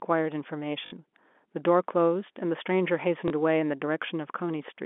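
A short robotic stutter comes at 0.86 to 0.92 s, buzzing at about 50 Hz, and a small blip at 3.28 to 3.30 s. This is packet loss with the last packet repeated, which fits three and then one lost 20 ms packets.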